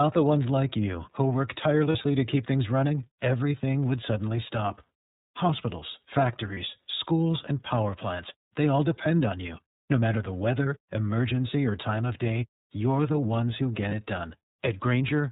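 The whole clip of speech runs through the iLBC codec, and you can plainly hear it. Everything above 4 kHz is gone, so it has that narrowband phone-line feel, and the voice comes out a bit rough and synthetic because each 30 ms frame's excitation is coded on its own. The quality fits iLBC's 13.33 kbps mode.

Then there are three lost iLBC frames, each about 30 ms, which sounds like one missing frame each time. The first is at 1.92 to 1.95 s, between "like you who work" and "to keep things running". The second is at 6.54 to 6.58 s, just before "schools and power plants". The third is at 13.89 to 13.93 s, right after "the ones who get". At each gap the decoder fills in by repeating the last pitch cycle mixed with noise, so you get a brief held, slightly buzzy vowel. Since iLBC frames don't depend on each other, the voice snaps straight back afterwards.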